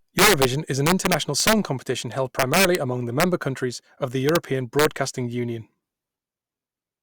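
Violent cracks tear through the loudest speech peaks at 0.19 to 0.45 s, 0.87 to 1.53 s (after "is an"), 2.39 to 2.75 s (after "competition held"), 3.20 to 3.24 s, 4.29 to 4.36 s (after "countries of the") and 4.79 to 4.85 s. This is integer overflow. The signal was pushed up to about 5 dB past full scale, and instead of clamping, each peak wrapped around to the opposite extreme, far harsher than ordinary clipping.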